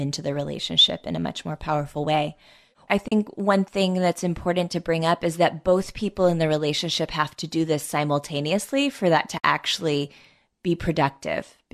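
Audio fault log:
3.08–3.12 s and 9.38–9.44 s, AAC frame loss with muting: soft-edged 40 ms and 60 ms holes, where lost frames decode as silence and overlapping windows fade the edges.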